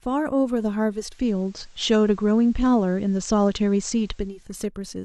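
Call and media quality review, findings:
Digital radio blending to analogue, 0.90–4.51 s. Hybrid receiver cross-fades over 0.4 s to FM. Faint hiss, level shifts about 4 dB.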